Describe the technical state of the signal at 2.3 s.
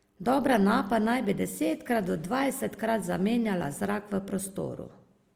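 At 2.3 s, as throughout the clip, the speech is squeezed through a low-rate codec, likely Opus compression in CELT mode. Starved bands are filled with folded or noise-like content, so the speech sounds plainly grainy and rough, which fits roughly 24 kbps.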